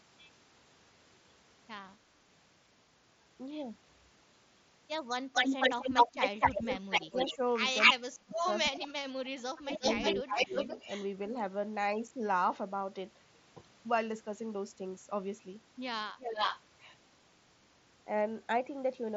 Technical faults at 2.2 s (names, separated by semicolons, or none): none